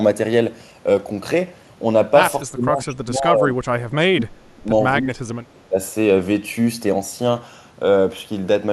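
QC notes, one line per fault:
2.43–3.50 s, 3.85–4.69 s, 5.01–5.31 s and 5.54–5.78 s: speech suppressed in double talk. The speech sinks in four patches, the worst dropping by roughly 30 dB, close to cutting out. This is likely an echo canceller mistaking the talker for loudspeaker echo while both sides spoke, then turning everything down.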